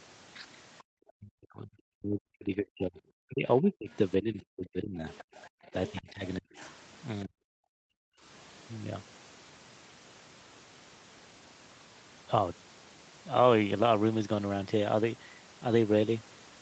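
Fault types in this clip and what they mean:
Background gated by the echo canceller: The canceller clamps the microphone while the far end plays. The room sound here falls by about 40 dB at 0.83 to 0.87 s, 5.49 to 5.66 s, and 7.62 to 8.23 s, then returns.
Speech suppressed in double talk: The talker's voice dips sharply, by roughly 35 to 40 dB, in pieces from 1.15 to 5.07 s and again from 6.0 to 7.34 s. Both ends were likely talking at once, so the canceller turned everything down.
Other side's voice leaking through: A faint second voice sits under the talker from 2.97 to 3.95 s, roughly 30 dB down, and from 5.15 to 6.75 s, about 20 dB down. This is likely loudspeaker sound the canceller failed to remove.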